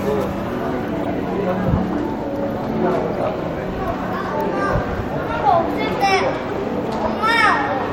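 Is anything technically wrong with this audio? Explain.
Yes. Corrupt frames were decoded at 1.03 to 1.06 s, 3.14 to 3.26 s and 6.49 to 6.51 s. Damaged compressed data was played anyway. Each event sounds like a short chirp or noise burst, peaking around -15 to -10 dBFS.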